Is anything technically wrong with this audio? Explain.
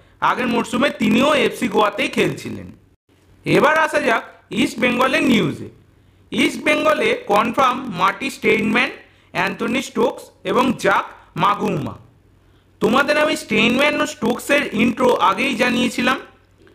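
Yes, there's a block size mismatch (padded) running through the whole clip. One stage is handing over blocks that are shorter than the next stage expects, so every block ends with a short stretch of silence. Those regular dropouts give a steady buzz at about 43.1 Hz, which fits 1024-sample blocks. The padding also stretches things out, so the audio plays at roughly 0.938 times normal speed while keeping about its usual pitch.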